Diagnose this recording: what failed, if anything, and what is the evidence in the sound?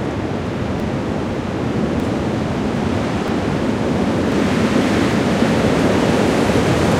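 Jumps forward at 0.8, 2.0, 3.28, 4.32 and 5.92 s, skipping roughly 40 to 100 ms each without silence, likely a dropped buffer (overrun) at the driver or buffer stage.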